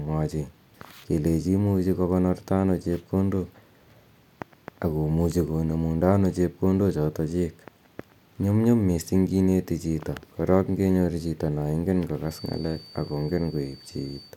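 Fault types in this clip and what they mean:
Feedback whistle: from 12.21 to 14.37 s, a thin 4.6 kHz tone that slowly swells and fades sits about 25 dB below the speech, likely from a loudspeaker-to-microphone loop held right at the edge of feedback.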